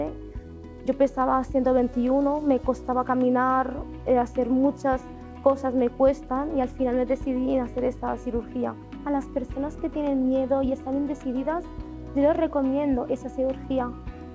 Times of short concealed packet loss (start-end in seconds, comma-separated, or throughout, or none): none